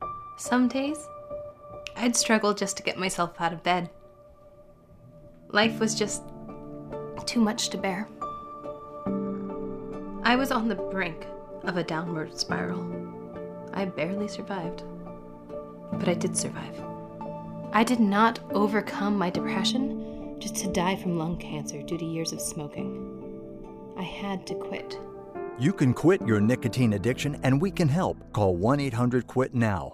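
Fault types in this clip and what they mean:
Channel delay (comb filtering): one channel arrived about a third of a millisecond behind the other, and when the two were summed to mono the shared content cancelled at evenly spaced frequencies, with the first notch around 1.5 kHz and further notches spaced roughly twice that apart above it. From 19.70 to 24.78 s the sound turns hollow and phasey, losing presence in the upper midrange, then returns to full tone once the channels realign.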